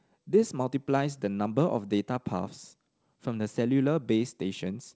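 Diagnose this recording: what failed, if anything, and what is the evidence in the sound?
Nothing failed; no faults heard.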